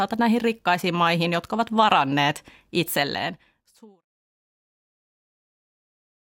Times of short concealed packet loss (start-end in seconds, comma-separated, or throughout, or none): none